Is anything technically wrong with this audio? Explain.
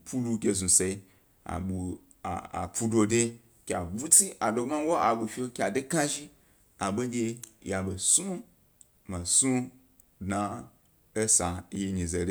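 Yes. At 0.89 s, 6.16 s and 10.3 s the stream likely lost a fraction of a millisecond of audio each time: dropped samples. The waveform jumps straight to a later value, heard as a single sharp click over the speech.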